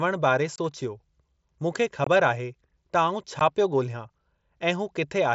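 Unconcealed Bluetooth headset packet loss cuts the speech at 0.56–0.58 s, 2.04–2.07 s and 3.39 s. Lost voice packets, about 22 ms twice and 15 ms once, were replaced with silence or an idle pattern, leaving brief abrupt holes in the wideband mSBC audio.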